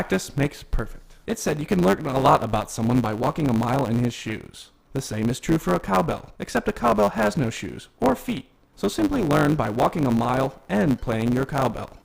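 A block size mismatch, with truncation, runs through the whole clip. One stage writes longer blocks than the next reads, which fits 512-sample blocks, and each block's end is dropped. A 100 Hz buzz results. The sound plays 1.07 times fast. Timbre holds.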